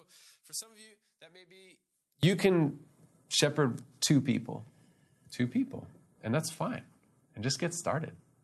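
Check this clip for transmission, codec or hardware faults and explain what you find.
There's one real fault, right at the start, and it's a polarity problem.

From 0.0 to about 2.23 s the speech drops by about 22 dB and goes faint. That's most likely one channel inverted: one side of the stereo pair has flipped polarity, so when the two are folded to mono the shared centre content cancels. What's left is just the small difference between channels, a faint ghost of the voice. After 2.23 s the level and body come back. The upper range stops short at around 12 kHz, which fits the call codec the audio passed through.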